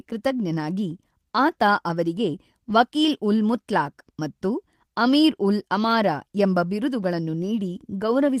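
Lost packets rebuilt from error correction occur at 0.37 to 0.39 s and at 2.69 to 2.75 s, just after "ಆತ ಅವರಿಗೆ". Each missing stretch of 20 ms and then 40 ms was filled from a low-bitrate backup copy. There is no gap, but the speech turns briefly rougher and noisier.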